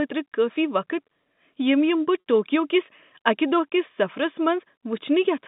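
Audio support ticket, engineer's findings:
Packet loss with pitch repetition, 2.2 to 2.26 s, just before "ٹوکیو کس". Held, buzzy 60 ms tone where the receiver's concealment loops the last pitch period to fill the gap, consistent with three 20 ms packets dropped. Probable component: network path or jitter buffer.

Line path: G.711 telephone coding, 150 Hz to 3.7 kHz band, faint level-tracking quantisation hiss.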